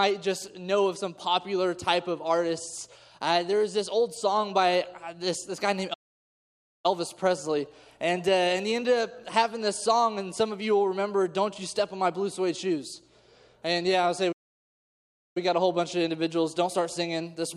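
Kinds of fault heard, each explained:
Playback stall: the output drops to silence in mid-flow twice, from 5.93 to 6.86 s for about 0.9 s, and from 14.32 to 15.37 s for about 1.04 s, then resumes. A gap of that length points to the player running dry. The likely cause is a starved input buffer or a blocked audio thread, with output held silent until data flowed again.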